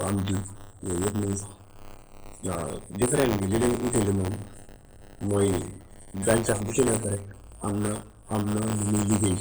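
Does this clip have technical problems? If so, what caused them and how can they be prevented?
Yes. Throughout the speech, a watery, swirly quality and smeared consonants point to MP3 compression, likely at a very low bitrate, around 16 kbps. Encode at a higher bitrate, or keep an uncompressed master.

There's also buffer tearing throughout: a constant 100 Hz robotic buzz whenever there's speech. The writer and reader of the audio buffer have drifted, so a small slice of each period repeats audio from roughly 20 ms earlier. Fix the buffer pointer synchronisation, or use larger buffers so the writer stays safely ahead.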